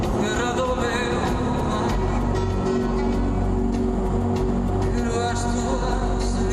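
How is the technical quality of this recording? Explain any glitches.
The technical quality is poor, with plainly audible codec damage throughout. The whole recording sounds dull, with a gurgling, granular grain. It is likely MP2 compression at a low bitrate, probably near 80 kbps. Too few bits shut off upper sub-bands, which flicker in and out. The remaining bands are coarsely quantised, producing that watery distortion.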